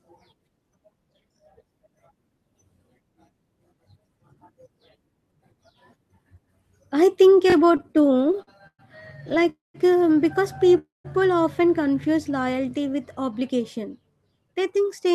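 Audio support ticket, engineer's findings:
Repeated buffer, 7.50 s. Short stutter with hard joins. The same fragment plays three times in quick succession. Repeat spacing fits a 20 ms buffer. Playback device underrun. New audio missed its deadline, so the last buffer was replayed twice. Nothing dropped, only delayed.

Repeated stalls (stutter), 7.65 to 8.81 s. Dragging, choppy audio. Seventeen short holds fill about 314 ms, roughly 27% of the span, longest 115 ms. Jitter buffer kept running dry on late packets. Last sound extended each time, faded in longer holds. Second burst, 9.25 to 9.47 s. Five holds, 48 ms total, none over 13 ms. Nothing missing in either.

Call audio freeze, 9.49 to 9.76 s. Brief fading buzz or hiss, then about 160 ms of silence, 248 ms inserted overall. Likely cause: packets held up in transit, jitter buffer empty. Resumes where it stopped, so delay grows by 248 ms. 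Again 10.78 to 11.06 s. Same shape, 263 ms inserted, 170 ms silent. Same mechanism.

Jitter buffer speed-up, 13.21 to 13.85 s. Hurried delivery, pitch unchanged. Runs at 107% of normal speed. Receiver trimmed excess buffered audio by cutting many short pitch-period slices, about 50 ms in total. Repeats 14.39 to 15.13 s, also at 107%, about 50 ms removed.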